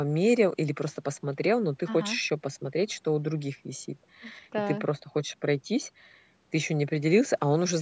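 No technical faults occur in this speech at any point; the lost lowest bass and the absence of anything above 8 kHz come from normal call microphone processing.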